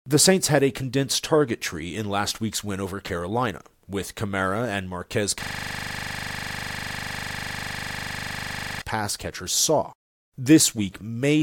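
A speech clip that, from 5.43 s to 8.82 s, gives way to a hard, rapid stutter, a rough buzz pulsing at 25 Hz, before the speech resumes at "catchers saw". It is a system hang loop: the computer or audio driver froze while the sound hardware kept replaying the last 40 ms of audio left in its ring buffer, dozens of times over. That loop length fits a buffer of about 40 ms.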